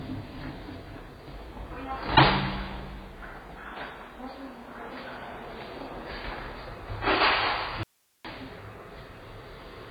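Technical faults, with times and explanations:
throughout: AAC compression, likely at a heavy setting. Nothing sounds above 4.9 kHz, so the audio is dull, and sustained parts swirl and fizz. That warbling shows bands being coarsely quantised or filled with noise, which fits a very low bitrate near 16 kbps, not a clean low-pass filter.
7.83–8.25 s: audio dropout to a faint residue, lasting 0.41 s. The sound cuts off abruptly, leaving only hiss roughly 40 dB below the signal, then returns mid-flow. The hiss likely shows the signal path stayed live, unlike a digital mute's silence or a natural pause or fade.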